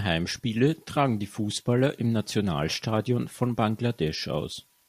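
At 4.43 s a corrupt frame was decoded: flipped bits in a couple of compressed frames were played anyway, spraying energy to wrong frequencies as a brief, quiet glitch near -35 dBFS. A spectrogram shows a short vertical smear; the waveform, a tiny spike.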